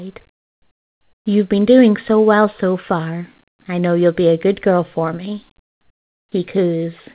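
From 0.32 to 1.25 s, the real background drops out for about 0.93 s. A steady, featureless hiss takes its place, about 6 dB quieter than the room sound around it. This is comfort noise in place of the background. The likely cause is discontinuous transmission. The sender stopped sending during the pause, and the receiver filled the gap with synthetic noise. The speech itself stays band-limited to 4 kHz, which fits a G.711 call path.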